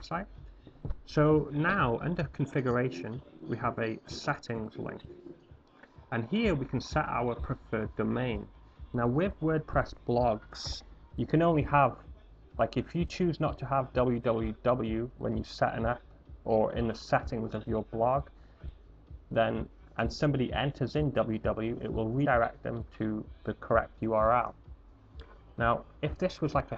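At 1.97 s and 22.25 s, compressed frames skipped: roughly one then two 26.1 ms frames go missing, jumping the sound ahead by about 30 and 50 ms. The waveform shows a misaligned join.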